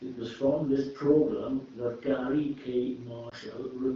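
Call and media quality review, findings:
Lost AMR speech frames, 3.29–3.34 s: brief dip or warble in the speech, which fits a single dropped 20 ms frame. Decoder bridged it with the last good pitch and vocal tract settings at lower gain. Runs over AMR-WB at 12.65 kbit/s with light codec colouring.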